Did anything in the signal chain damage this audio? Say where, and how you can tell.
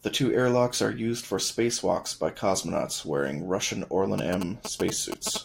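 Yes. From 4.18 s to 5.37 s, near the end of the speech, a galloping dit-dit-dit of short buzzes breaks in, only a little quieter than the speech itself. The buzz repeats at 217 Hz, which marks these as GSM signalling bursts. A nearby 2G phone exchanging short control bursts with the network radiated into the analogue wiring, where an input stage rectified the RF envelope into audible pulses.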